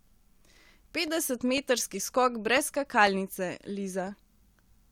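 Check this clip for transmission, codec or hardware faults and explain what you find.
One hardware fault is present: periodic USB or driver dropouts from 0.07 s to 4.57 s, every 0.5 s, each losing about a millisecond to silence, heard as regular ticks through the speech. The waveform shows brief silent gaps, and the spectrogram shows thin broadband vertical lines.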